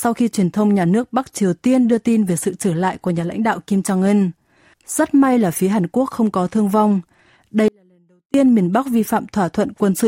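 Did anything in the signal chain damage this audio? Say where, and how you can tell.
Yes. From 7.68 to 8.34 s the speech abruptly drops to a faint leak roughly 40 dB down for about 0.66 s, then snaps back mid-flow. This is an audio dropout to a faint residue, likely from an intermittent analogue connection while the downstream path stayed live.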